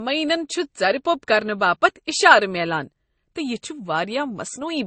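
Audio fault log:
throughout: transcoding between lossy codecs. The speech was likely encoded at a low MP3 rate and then re-encoded as Opus, which spent bits reproducing the first codec's artefacts and added its own. Both kinds of artefact are heard together, and nothing remains above 8.4 kHz.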